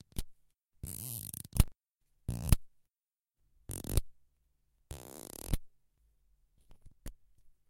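No technical faults are audible.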